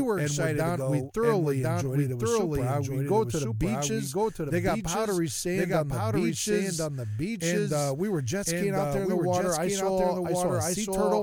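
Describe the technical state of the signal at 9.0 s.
At 9.0 s the speech carries a doubled audio track, present throughout the clip: a second full-band copy, about as loud as the original, trails by about a second, likely from a slower second capture path. On a spectrogram, each pattern repeats a second later.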